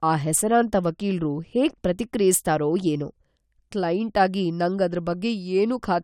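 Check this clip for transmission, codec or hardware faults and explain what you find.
No faults are audible anywhere in this speech.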